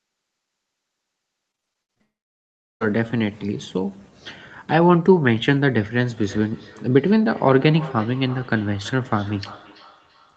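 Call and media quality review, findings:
Choppy, robotic speech, 1.51–2.02 s, with seven short holes (longest 62 ms) patched by stretching the previous sound. About 42% of the span is concealed. Repeated packet loss in the network leg, with the jitter buffer concealment filling each gap.

Speech breaks into a brief fading buzz at 2.02 s, then near-silence until 2.83 s, with about 0.8 s of speech never heard and roughly 0.74 s of it silent. Likely a long network dropout, with concealment extending the last frame before muting.

Speech repeats itself at intervals of about a third of a second from 6.18 s to the end, thinner with each pass, the loudest repeat about 20 dB below the speech. Feedback echo between two devices in one room, one device's playback re-entering the other's microphone, outside either echo canceller's reach.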